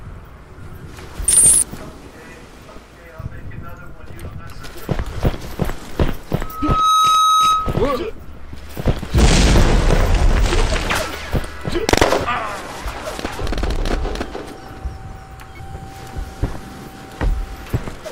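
A microphone is picking up the loudspeaker it feeds, and at 1.3 kHz the loop gain passes unity, causing loudspeaker feedback squeal. From 6.41 to 7.87 s a pure 1.3 kHz tone swells over roughly half a second into a squeal standing a few dB above the audio before cutting off.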